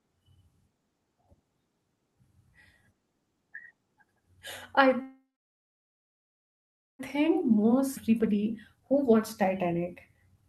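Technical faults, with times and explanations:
5.01 to 7.01 s, call audio freeze: The sound stops for about 2 s. For roughly the first 0.2 s the last sound carries on as a fading buzz, then about 1.8 s is flat silence before the audio resumes where it left off. This is likely packets arriving late and the jitter buffer running dry. Nothing is lost, but a gap has been inserted. On a spectrogram, a brief smeared tail gives way to a blank band. The waveform shows a decaying stub and then a flat line.
7.15 to 10.48 s, jitter buffer speed-up: After the stall, the audio plays at about 117% speed with unchanged pitch, so it sounds hurried. The buffer had filled with late packets and was draining the excess by repeatedly cutting out pitch-period-sized slices, about half a second in total. On a spectrogram, the harmonics stay at the same heights while syllables and transitions are compressed in time. 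The waveform shows cycles of unchanged length with no visible gaps.
7.96 to 7.98 s, skip ahead: Playback jumps forward, dropping around a second of audio, and the two sides are joined with only a few milliseconds of fill. A chunk of audio was dropped, in transit or by the overflowing buffer, while later packets were already waiting. The result is an abrupt splice with no pause. On a spectrogram, one spectral pattern switches to another across a hard vertical seam. The waveform changes shape at that instant, sometimes with a small click. The Opus call path's upper limit near 12 kHz stays steady across all of these events.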